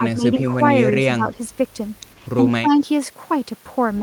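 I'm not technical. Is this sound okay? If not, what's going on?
No. Speech suppressed in double talk, at 0 to 0.45 s, 0.89 to 1.34 s and 2.61 to 2.79 s: the voice dips noticeably quieter in patches, most in the last. Likely the other side talked at once, and echo control turned this voice down too.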